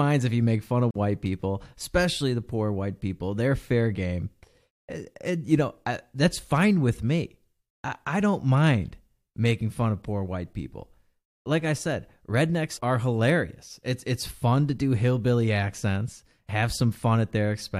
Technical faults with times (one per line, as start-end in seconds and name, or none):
0.91-0.95 gap at a join of encoded pieces